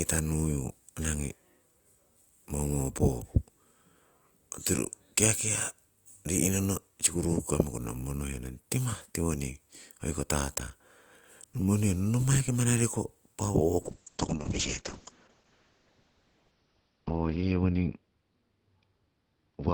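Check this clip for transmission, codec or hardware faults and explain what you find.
One fault is present: a call bitrate drop from 13.82 s to the end of the clip at 19.74 s. The encoder was starved of bits as bandwidth estimates fell. The speech turns coarse and watery, and the top end collapses from 20 kHz to 6 kHz. This fits a fall from about 32 kbps to roughly 6 kbps, with the worst stretch lasting about 3.1 s. Unlike packet loss, the audio keeps flowing without gaps or repeats. It simply degrades in quality throughout.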